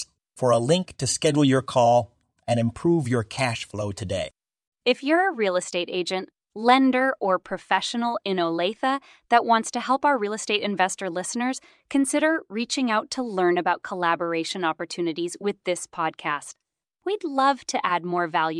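No audible dropouts, clicks, distortion or timing breaks anywhere in the recording.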